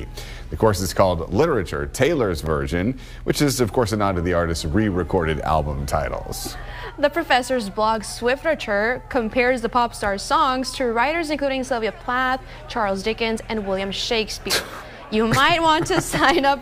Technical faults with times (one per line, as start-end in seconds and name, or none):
2.46 block of digital silence